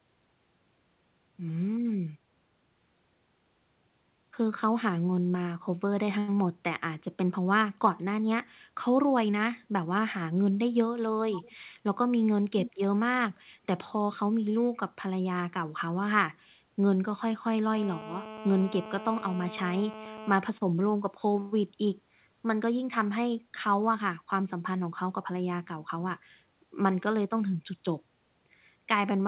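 At 11.32 to 11.52 s and again at 12.66 to 12.71 s, a faint delayed copy of the speech comes back, trailing the original by about half a second. The first scrap sits roughly 15 dB below the speech; the second, shorter one is stronger, around 10 dB down. This is likely an echo leak, where a far-end loudspeaker's sound slipped past the echo canceller. On a spectrogram, the harmonic pattern reappears faintly about 0.5 s later, all of it below the 4 kHz ceiling of the call path.

From 17.74 to 20.33 s, a hard, raspy GSM phone buzz runs steadily underneath the speech at about 14 dB below it. A nearby 2G handset on a call was transmitting in bursts 217 times a second, and the audio circuitry rectified those radio pulses into sound. On a spectrogram, this appears as a dense comb of evenly spaced horizontal lines at 217 Hz and its multiples, starting and stopping abruptly. The waveform shows a regular pulse train repeating every 4.6 ms.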